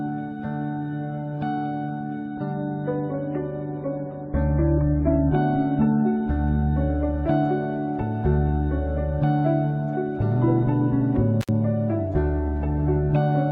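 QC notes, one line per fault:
2.26–6.26 s, adaptive stream at a lower bitrate: quality drops abruptly with no gap, nothing above 4.6 kHz and artefacts rising, which fits a switch down to roughly 24 kbit/s AAC.
11.41–11.49 s, intermittent contact: a loose connection opens for about 62 ms, cutting the sound out with crackle at both edges and faint hiss while open.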